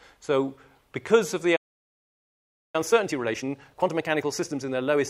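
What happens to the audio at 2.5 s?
A playback stall covers that moment: the audio drops out at 1.56 s and stays silent until 2.76 s, a gap of about 1.18 s, so 2.5 s falls well inside it. The sound cuts off abruptly in mid-flow, with nothing audible through the gap, then resumes. The likely cause is the player running short of data or having its output thread blocked, leaving nothing to send to the output until it recovered.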